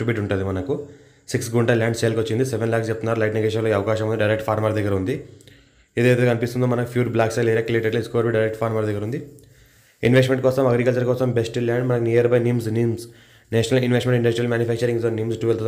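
No technical faults can be heard anywhere in the clip. Nothing stands out from the surrounding audio at any point, so there is nothing to place on a timeline.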